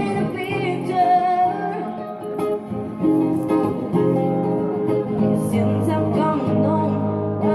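No technical faults are audible.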